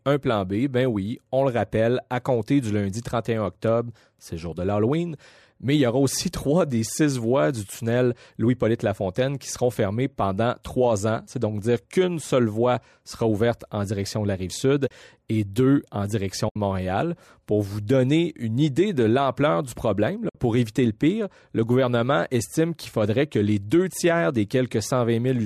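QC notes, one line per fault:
14.88–14.91 s, 16.49–16.56 s, 20.29–20.35 s: AAC frame loss with muting. Short soft-edged dropouts of about 30, 70 and 60 ms, consistent with runs of 10 ms frames lost and zeroed by the decoder, likely in low-delay AAC. Window overlap fades each gap. On a spectrogram, full-band blank columns with tapered edges; in the waveform, brief smooth dips to silence.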